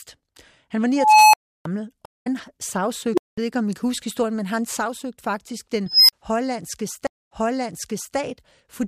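At 0.96 s an unstable filter, a recursive stage fed bad coefficients, lets its output run away: a tone near 1 kHz swells over 373 ms into clipping, then overflow cuts the sound for 320 ms. At 2.05 s a stream reconnect drops the connection and restarts decoding, leaving 166 ms of silence before the audio resumes somewhere around 150 ms further on. The filter diverges again at 3.13 s, a roughly 400 Hz squeal climbing in 44 ms before 200 ms of silence, and at 5.86 s, a tone around 5 kHz growing over 224 ms followed by a 40 ms dropout. At 7.07 s a second reconnect leaves 191 ms of silence, and the server resends a burst, so playback resumes 912 ms earlier and repeats that stretch.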